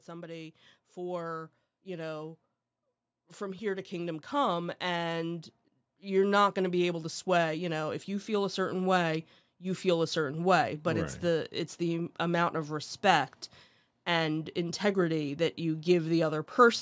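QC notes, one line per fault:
0.05–2.41 s, automatic gain rising: the level climbs about 4 dB over a couple of seconds, voice and background swelling together as the AGC decides the input's too quiet.
3.12–8.7 s, automatic gain rising again, a bigger push of about 9 dB, leveling off just before "way you feel a".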